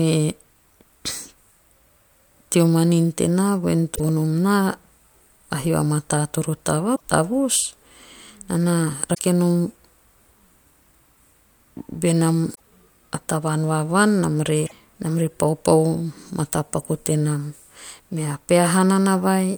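A speech clip with damaged data in a compressed stream. Five short bursts of corruption break through. The first comes right after "teo manin tenaa vvoen", at 3.93 to 4.00 s. The others fall at 6.93 to 7.01 s, 9.11 to 9.20 s, 12.52 to 12.59 s and 14.63 to 14.72 s. Each lasts about 70 to 90 ms and is heard as a brief chirp, squawk, click or short hole. Bad bytes in the coded stream throw the decoder off. It loses frame sync and skips ahead to the next valid header.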